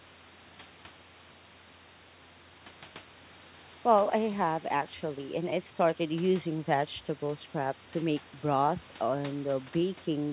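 Nothing stood out on listening to this speech, which arrives over a call path that carries nothing above 4 kHz.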